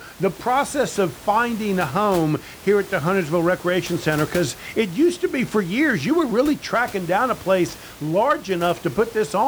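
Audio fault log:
No technical faults are present in the speech signal, with only the recording room's own background noise audible, sitting about 19 dB below the speech.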